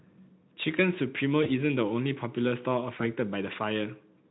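At 1.43 to 1.50 s and again at 2.97 to 3.05 s, there is VoIP packet loss concealed by the speech codec. Each gap fits one lost 20 ms frame. The decoder repeats its last pitch and filter at falling gain, so the speech smears into a brief buzzy tone or coloured noise that fades. It stays weak or distorted for tens of milliseconds after the Speex packets return.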